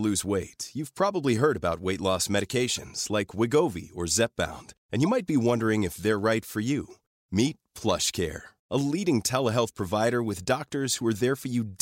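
Corrupt frames were decoded with misread gains and codes, throwing energy to the wrong frequencies. The result is brief chirps at 2.77–2.81 s, 5.05–5.08 s and 10.91–11.00 s, each louder than the last.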